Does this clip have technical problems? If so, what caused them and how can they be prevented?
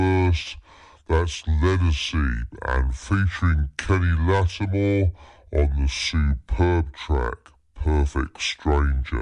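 Yes. The whole clip has a wrong sample rate fault. The speech plays at 0.67 times normal speed and 7.0 semitones low, sounding slow and deep. That ratio fits 48 kHz audio played at 32 kHz without conversion. Store the true rate and resample on playback.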